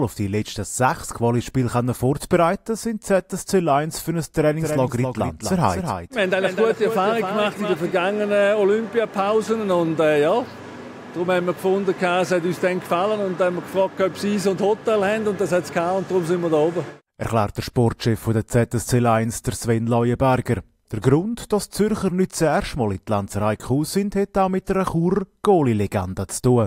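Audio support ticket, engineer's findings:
Doubled audio track, 4.60 to 7.92 s. Second full-band copy of the sound trails the original by about a third of a second, a few dB quieter. Flat, dry repeat with no decay or room colour. Starts and stops abruptly at those edges. Likely cause: a slower parallel capture path or an edit leaving two out-of-step copies mixed together. Check routing and duplicate clips on the timeline.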